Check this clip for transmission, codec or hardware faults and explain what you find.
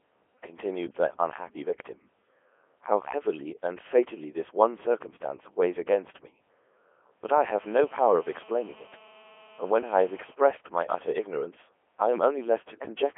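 One fault runs through the whole clip. The speech sounds robotic and buzzy from start to finish, squeezed into a telephone-like band of roughly 300 Hz to 3.4 kHz with nothing above 3.5 kHz. That is the Codec 2 vocoder, heavily damaging the signal. It does not carry the waveform. It sends only pitch, voicing, energy and a rough spectral envelope, and the decoder rebuilds the voice from sine waves. The thin, synthetic quality fits its top 3.2 kbit/s mode.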